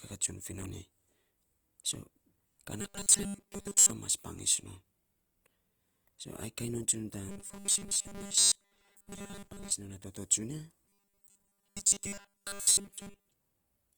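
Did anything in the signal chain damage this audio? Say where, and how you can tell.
Yes. At the codec stage, the speech sounds grainy and rough throughout, likely from Opus compression around 24 kbps in music mode. A spectrogram shows noise-filled bands across the full band.

At the buffer stage, there is robotic sound from repeated short buffers at 2.81–3.90 s, 7.29–9.72 s (ending before "non a") and 10.85–13.32 s. A rigid 200 Hz buzz likely comes from repeating 5 ms chunks in place of most of the real audio. This shows as 200 Hz comb lines on a spectrogram and as identical 5 ms cycles in the waveform.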